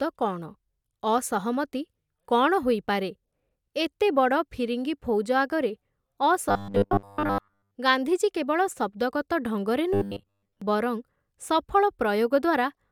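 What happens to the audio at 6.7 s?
At 6.7 s the speech is inside a stretch of robotic sound from repeated short buffers, running from 6.49 to 7.75 s. The voice becomes a rigid metallic buzz fixed at 100 Hz that only loosely tracks the words. The likely cause is audio arriving too seldom, so playback loops a 10 ms fragment for most of that span while the real signal is skipped.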